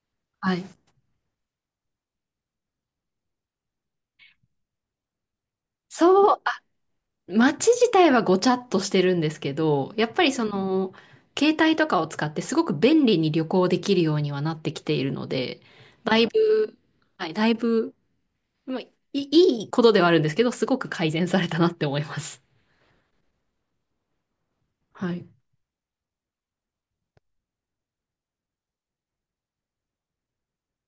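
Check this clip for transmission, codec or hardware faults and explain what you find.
No transmission, codec or hardware faults are audible.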